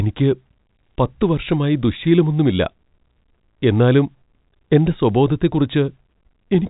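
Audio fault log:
No faults heard.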